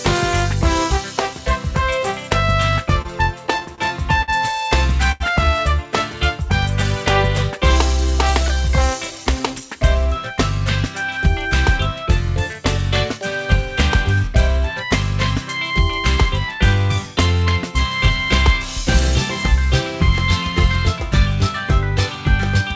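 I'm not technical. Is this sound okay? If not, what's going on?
No. Repeated stalls (stutter) run from 3.02 to 4.30 s. Pieces of the sound kept arriving late, so five times the playback ran dry and the receiver stretched the last bit of sound to cover, about 137 ms in all, the longest gap 59 ms. Nothing is lost, but it drags and stammers.

A short stall from a late packet comes at 5.12 to 5.22 s. One piece of audio missed its slot, so the receiver held the previous sound for 84 ms until it turned up, then carried on. You hear one sound held slightly too long, perhaps with a faint buzz or dip.

A jitter buffer speed-up follows from 8.29 to 9.76 s. After the delays, too much audio had piled up waiting, so the receiver trimmed tiny slices, roughly 70 ms in total, to catch up. That stretch plays about 4% faster at the same pitch and can feel slightly rushed.

All of this came through an internet-call path using the G.722 codec, which is why nothing above 8 kHz is present.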